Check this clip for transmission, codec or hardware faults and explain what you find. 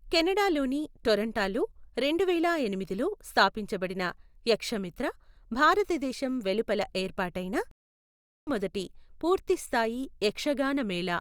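One transmission fault is present: a stream reconnect. It occurs from 7.71 to 8.50 s, right after "యక్షమిత్ర భారతదేశం వెలుపల ఏర్పాటైన". The connection dropped, so the player fell silent for about 0.76 s. It then reconnected and started a new decoder partway through the stream. When the speech returns, it does not pick up where it stopped. It jumps ahead by roughly 0.7 s. That stretch of speech is simply missing. The listener hears a dead gap followed by an abrupt skip forward.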